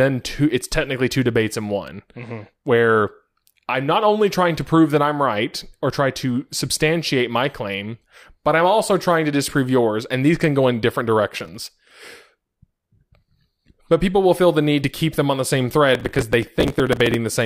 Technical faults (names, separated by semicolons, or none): processor overload crackle